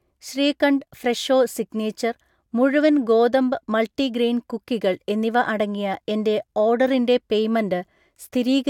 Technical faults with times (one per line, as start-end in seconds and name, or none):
none